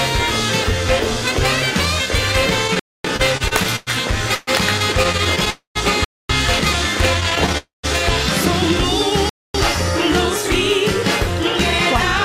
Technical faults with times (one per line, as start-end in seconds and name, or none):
2.67-3.89 repeated stalls (stutter)
2.79-3.04 gap between chunks
4.35-4.49 call audio freeze
5.03-5.48 repeated stalls (stutter)
5.50-5.77 call audio freeze
6.04-6.29 gap between chunks
7.20-7.56 repeated stalls (stutter)
7.58-7.85 call audio freeze
9.29-9.54 gap between chunks